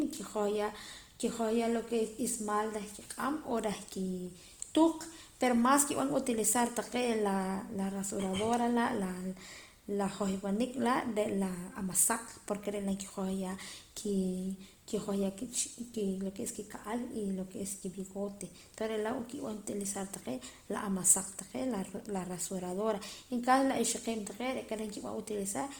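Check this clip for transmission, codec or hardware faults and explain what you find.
There's one codec fault, and it runs the whole clip. It's Opus compression, likely in its CELT music mode at a low rate around 24 kbps. The band energies are kept and starved bands are filled with folded or noisy content, so the speech sounds grainy and rough rather than swirly. The full bandwidth survives up to about 20.2 kHz.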